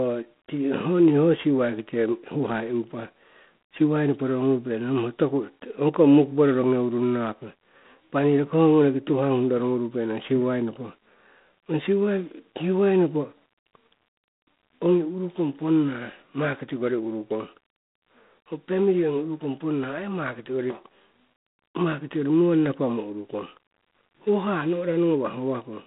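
From start to finish the speech carries G.726 ADPCM damage at 24 kbit/s, which points to 3 bits a sample of prediction error. That coarse quantising produces a harsh, rasping hiss that swells and fades with the speech level. The line band runs from 150 Hz to 3.7 kHz, and nothing sits above 3.8 kHz. A spectrogram shows a flat ceiling there, with grainy noise filling the gaps between harmonics. The waveform looks fuzzy along loud stretches.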